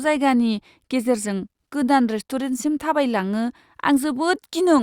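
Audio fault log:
No faults found in this speech clip.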